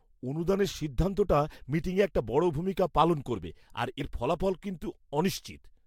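A brief jump interrupts the speech between 3.99 and 4.01 s, just after "ভূমিকা পালন করবে আর", and the talker seems to leap slightly forward. This is compressed frames skipped: around 50 ms of coded audio was never played, either because it was missing from the file or because the decoder rejected it as damaged. The size of the jump points to roughly two frames.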